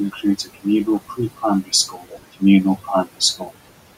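Speech with noise suppressor artifacts throughout: the room noise, sitting about 15 dB under the voice, gets pulled down by about 18 dB between phrases and rises again beneath them. The same processing also causes speech cut by the noise suppressor. Quiet bits get mistaken for noise and ducked by up to about 18 dB at 0.12 to 0.66 s (roughly 150 ms hit) and 1.63 to 2.42 s (around half a second), and by about 13 dB at 3.38 to 3.51 s, leaving those moments swallowed and faint.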